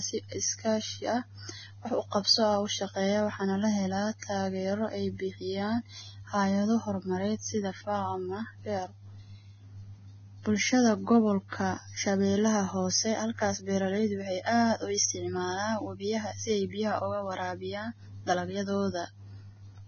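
A speech recording that carries heavy Vorbis compression damage from start to finish: nothing is present above 6.5 kHz, and the remaining treble sounds hissy and grainy, with consonant attacks smeared and tones roughened, which fits a very low bitrate of around 17 kbps. The likely cause is coarse quantisation of the residue, replacing fine detail with noise. On a spectrogram the energy stops at a flat ceiling near 6.5 kHz, with blotchy, speckled texture just beneath it.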